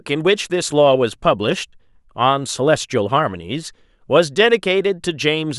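No technical faults are audible.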